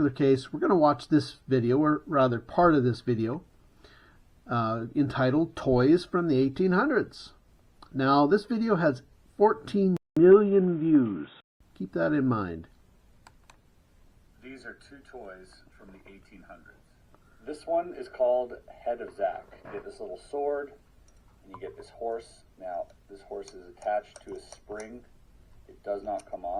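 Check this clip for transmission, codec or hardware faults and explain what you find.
One fault stands out. From 9.97 to 11.61 s, the input appears to switch to a poorer device. The sound drops out for about 200 ms, then returns dull and boxy, with nothing above 3.8 kHz. A new noise floor sits about 35 dB down, and loudness barely changes. The likely cause is the system changing to another microphone or a headset call profile.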